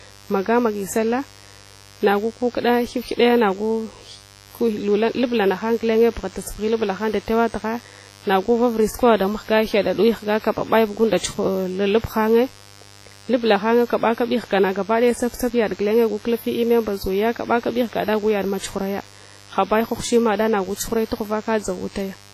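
Switching spikes from a dimmer, rectifier or unshielded run have leaked into the signal path of this speech recording, at twice per cycle of a 50 Hz mains supply. The result is a mains buzz that runs through the whole clip, with harmonics of 50 Hz stacked up into the kilohertz range. It sits about 25 dB below the speech and gives a steady, raspy edge that stays put even in the gaps between phrases.

The second problem is likely WMA compression at a low bitrate, around 24 kbps judging by the damage. A long-block transform codec spreads its quantisation noise over tens of milliseconds and drops weaker spectral lines. From start to finish the speech is heavily marred: it rings and sounds washy, and a hiss swells and fades with each phrase. Nothing remains above 15.4 kHz, so the top end stops at a hard ceiling.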